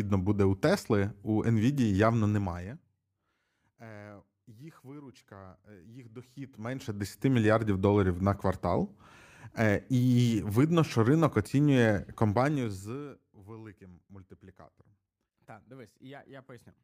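Zipper noise, 2.28 to 3.04 s: an unsmoothed fade-down of about 25 dB moves in 1 dB steps, about thirty a second, each ticking audibly.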